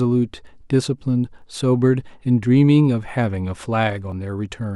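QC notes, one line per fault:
0.55, 1.42, 3.09 and 4.12 s: dropped buffer (overrun), likely. Each is a jump where the speech skips forward by around 10 ms, with the two sides butted together. Unlike a dropout, there is no silent gap, just a missing slice and an abrupt discontinuity.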